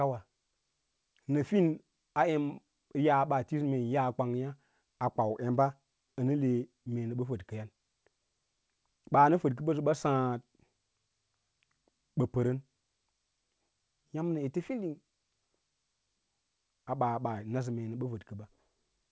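No faults in this speech: it runs over a WebRTC call path with nothing above 8 kHz, consistent with G.722 at 64 kbps working as designed.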